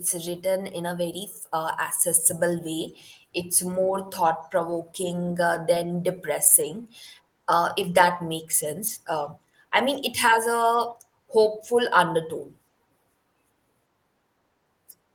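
A speech clip with scattered short gaps between 4.07 and 4.95 s. About five brief holes fall across that stretch. The longest is around 10 ms. Together they fill roughly 50 ms, a few percent of the span. Each gap comes from a lost or late packet. The receiver bridged it by extending the last sound. The speech stays clear but picks up small ticks and smeared hiccups. Timing stretches by about 6 ms.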